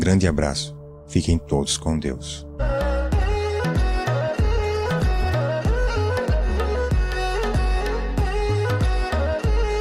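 The audio turns rough, watery or muffled from 4.32 s to 5.39 s, with the coarsest stretch lasting about 1.01 s before the sound recovers. This is a call bitrate drop: the call's bandwidth estimate fell and the Opus encoder was pushed to spend far fewer bits. The sound fits a fall from about 96 kbps to roughly 16 kbps, where coarse coding smears detail and the upper frequencies are cut away.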